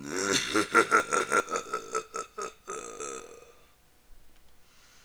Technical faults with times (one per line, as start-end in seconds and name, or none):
1.00-1.40 chunks out of order
2.80-3.20 chunks out of order